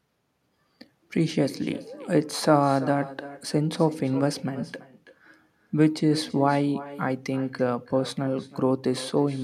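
Right through the speech there's echo with no canceller: a loudspeaker at the far end feeds the mic, so every phrase returns about a third of a second later, about 16 dB down, and thin.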